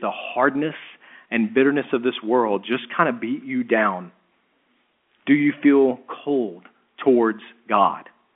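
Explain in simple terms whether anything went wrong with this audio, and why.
Nothing went wrong here: the speech has gone through ordinary telephone coding, which gives it the narrow sound of a phone call, and no fault can be heard.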